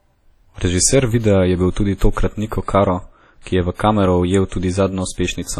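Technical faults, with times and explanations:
Throughout: WMA compression. The speech carries a ringing, washy quality with hiss that swells and fades with the signal, and nothing above 17.4 kHz. The heavy damage likely comes from a long-block transform codec, which fits a low bitrate near 32 kbps.
3.42 to 3.46 s: pre-echo. A short hiss arrives about 44 ms ahead of a sharp attack, softening its onset. The codec spread quantisation noise sized for the loud attack across its whole block, filling the quiet moment before it.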